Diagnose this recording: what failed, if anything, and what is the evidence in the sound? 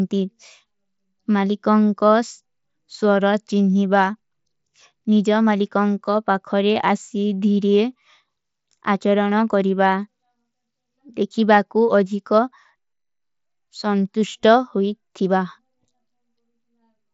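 Nothing stood out on listening to the speech in this recording.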